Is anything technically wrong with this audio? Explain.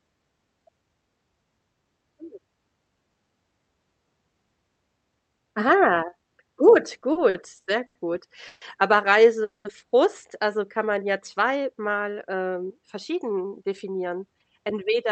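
Yes, the speech has several playback faults typical of a real-time call.

From 7.01 to 7.97 s the speech stumbles and drags: five brief hitches, each smearing the preceding sound onward rather than cutting out, the longest about 90 ms. These are repeated stalls (stutter). Packets arrived late or too slowly, so the jitter buffer kept running dry and the receiver filled about 220 ms by extending the last sound. That is roughly a quarter of that stretch, with nothing actually lost.

At 8.47 s the sound hangs for 140 ms as a held continuation. At 9.44 s a longer hold of about 210 ms fades and drops to silence for about 110 ms of that time before the speech resumes at 9.67 s. Both are a call audio freeze, likely caused by packets being held up in transit. The buffer emptied, the receiver stretched the last sound, and playback picked up where it left off, inserting a gap.

From 12.49 s to the end at 15.10 s the speech sounds hurried but keeps its normal pitch, running about 8% fast. 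This is a jitter buffer speed-up. The buffer held surplus audio, so the receiver trimmed many tiny pitch-period slices, about a fifth of a second in all, to bring the latency back down.

Throughout, the call codec limits the audio to about 8 kHz bandwidth.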